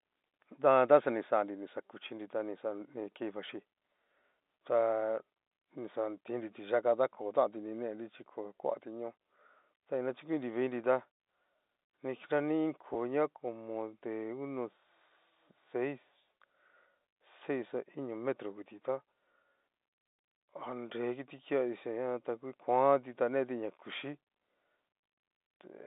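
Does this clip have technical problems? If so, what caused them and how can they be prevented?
Yes. At 12.94 s the speech briefly holds on a slightly buzzy tone: packet loss with pitch repetition, where the receiver repeated the last pitch period to cover roughly 10 ms of missing audio. A jitter buffer with forward error correction or redundant packets on a less congested network path would prevent this.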